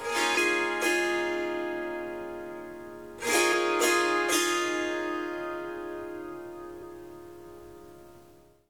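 Brief glitches break through the sound at 0.33 to 0.38 s, 3.49 to 3.54 s and 6.78 to 6.83 s, each lasting roughly 50 ms. These are damaged data in a compressed stream. At each point the encoded bytes arriving at the decoder were corrupt, so it either decoded nonsense or threw the frames away. It then lost its place and had to find the next valid frame header before normal sound could resume.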